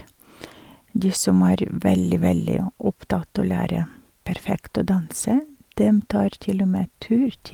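A speech recording, and nothing about it is technically wrong.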